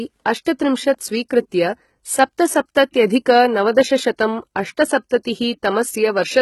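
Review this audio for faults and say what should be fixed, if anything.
Gritty, lispy treble on the speech's s sounds, with nothing above 11.8 kHz. This is likely HE-AAC compression, which rebuilds the treble from copied lower bands, and the damage fits a bitrate around 16 kbps.

A short hiss smears just ahead of attacks at 0.45 s and 5.23 s, spreading 13 ms and 16 ms. This is pre-echo: the block's quantisation noise fills the quiet moment before each onset.

Re-encoding the original at a higher bitrate with plain AAC, which allows short transform blocks for transients, would prevent both.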